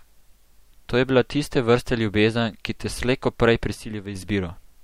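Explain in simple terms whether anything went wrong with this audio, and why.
From 3.74 to 4.15 s the speech suddenly turns noticeably quieter, then recovers. The likely cause is one channel dropping out, losing half the stereo sound.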